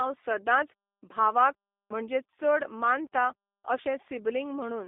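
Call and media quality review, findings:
Narrowband, slightly rough, synthetic-sounding speech throughout, band roughly 250 Hz to 3.6 kHz. G.729 codec: pulse-and-predictor frame coding at what fits 8 kbit/s, plainly audible.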